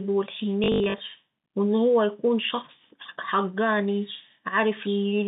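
Between 0.64 and 1.0 s there's packet loss with the last packet repeated. About 200 ms goes missing in bursts of up to 80 ms, and each is patched with replays, the runs coming out as buzzy robotic stutters.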